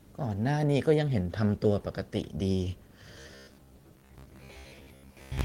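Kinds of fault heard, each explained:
Robotic sound from repeated short buffers: From 3.19 s, speech becomes a metallic buzz at 66.7 Hz. Likely a 15 ms chunk repeating.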